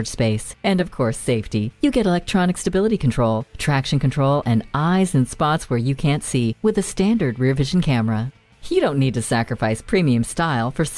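No technical faults are audible anywhere in this recording.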